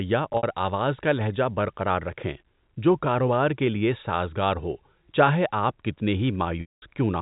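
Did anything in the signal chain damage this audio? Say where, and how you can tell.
Yes, the network stage damaged it, through packet loss with pitch repetition. From 0.33 to 0.43 s, just before "آواز کا لہجہ برقرار", about 70 ms goes missing in scattered bursts, the longest 60 ms. The receiver bridges the gaps by looping the last pitch period, which makes a brief held, buzzy tone. From 6.61 to 6.82 s, after "ہو چاہے آپ کتنے", a 210 ms gap outlasts the repeat. The loop fades to silence and the sound returns with a short cross-fade. The gap sizes fit 10 ms packets. The G.711 A-law telephone band underneath adds at most faint quantisation noise.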